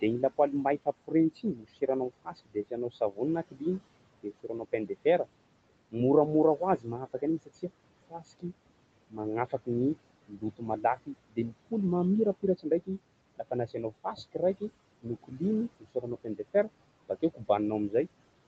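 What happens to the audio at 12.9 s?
At 12.9 s the noise suppressor is misjudging parts of the speech as steady background and pulling them down with it, a speech cut by the noise suppressor that runs from 0.01 s to about 18.47 s. Its deepest drops reach about 22 dB, so soft consonants and word endings come out swallowed or faint.

The same suppressor is also producing noise suppressor artifacts throughout, cutting what it takes for noise by about 21 dB frame by frame. The background falls away in gaps and returns under speech.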